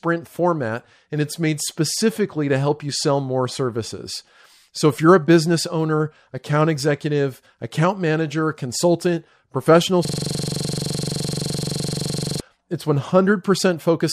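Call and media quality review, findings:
System hang loop, 10.05 to 12.4 s. Speech replaced by one 42.67 ms fragment repeating over fifty times, a 23.4 Hz stutter-buzz. Host or audio driver froze while hardware kept replaying its ring buffer, which fits a 2048-sample buffer.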